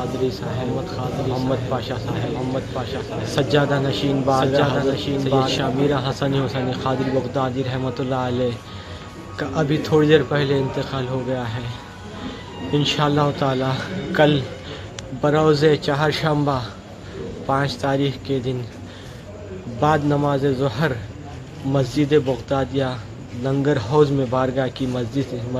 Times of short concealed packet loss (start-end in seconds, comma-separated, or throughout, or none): none